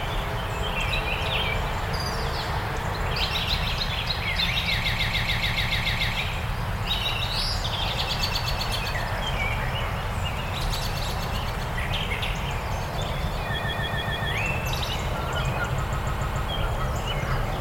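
A stutter at 4.84 to 6.13 s, where one 144 ms stretch of sound plays over and over, nine extra times; again at 13.57 to 14.29 s with five extra plays; and at 15.90 to 16.48 s with four. These are repeated frames: a short run of compressed frames, which fits about six frames, was written or sent more than once, so the decoder replayed it, adding about 1.3 s, 0.72 s and 0.58 s.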